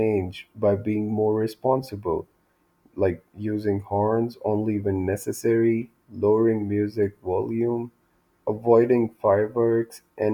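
Speech recording with no audible technical faults anywhere.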